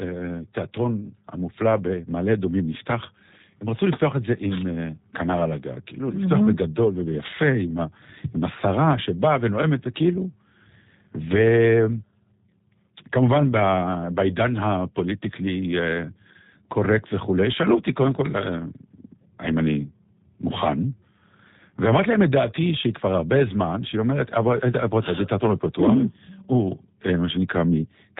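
A speech recording carrying audible G.729 codec damage from start to finish. Nothing above 4 kHz survives. Voices sound slightly rough and synthetic, rebuilt from a coarse vocal tract model and sparse pulses. The plainly audible degradation fits an 8 kbit/s VoIP link.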